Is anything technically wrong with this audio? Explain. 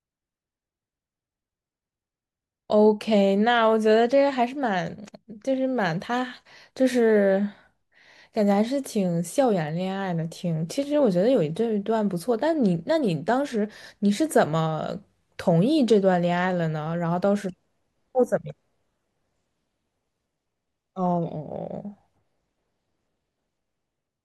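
No, nothing technically wrong turns up anywhere in this speech recording.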